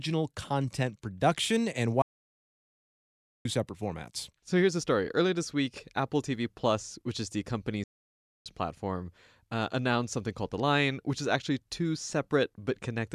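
The speech drops into silence at 2.02 s, just after "content production and", for about 1.4 s, then resumes with "separate formats"; a shorter gap of 0.6 s follows at 7.84 s after "which is the". Each is a playback stall, likely from the player running out of data before recovering.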